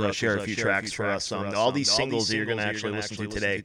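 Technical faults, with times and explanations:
Throughout, doubled audio track: the speech plays twice, a dry full-band copy trailing roughly 0.4 s behind at about 5 dB lower, likely from a second, slower capture path. Spectrogram and waveform show each speech pattern repeated, slightly fainter, shifted right.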